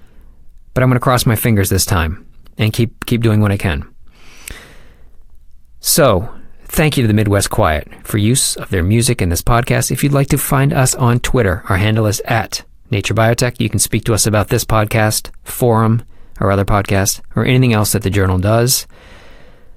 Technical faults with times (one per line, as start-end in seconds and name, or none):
none